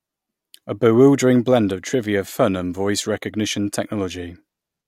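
Listening closely to the speech, nothing stood out as a technical fault at any point.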